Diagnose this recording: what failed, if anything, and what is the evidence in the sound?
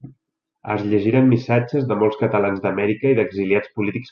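The codec stage shows MP2 compression throughout. The speech sounds dull and granular with steady gurgling, as upper sub-bands drop out. The sound points to a low rate near 80 kbps, likely the cause. The damage is constant rather than bursty.

The transmission stage shows DAB burbling at 1.67–1.70 s, just before "de molts catalans". A brief burst of noise blips comes from bit errors corrupting samples in individual sub-bands. Unlike the steady codec dullness, it is isolated.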